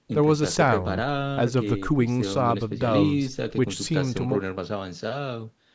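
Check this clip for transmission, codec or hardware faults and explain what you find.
No transmission, codec or hardware faults.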